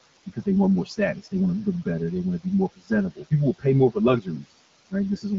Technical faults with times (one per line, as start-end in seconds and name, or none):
0.00-5.38 channel delay (comb filtering)
0.00-5.38 noise suppressor artifacts
0.85-1.33 speech cut by the noise suppressor
2.39-4.46 speech cut by the noise suppressor
4.90-5.25 speech cut by the noise suppressor